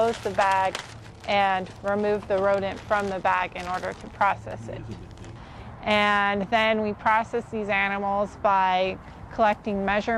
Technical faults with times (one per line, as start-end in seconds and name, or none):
none